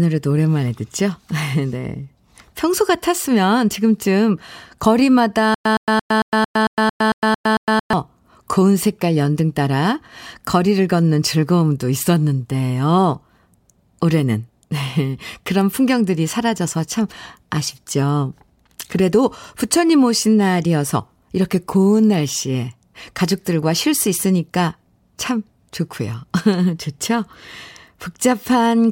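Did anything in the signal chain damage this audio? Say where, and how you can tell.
Yes. From 5.55 s to 7.93 s the speech breaks into a stutter with silent gaps: a 116 ms fragment plays, then about 109 ms of dead digital silence, and the same fragment returns every 225 ms, ten times over. The evenly spaced, identical bursts point to playback or the stream buffer. The player likely stalled and replayed its last fragment at each retry before running empty, so the speech due in that stretch is missing.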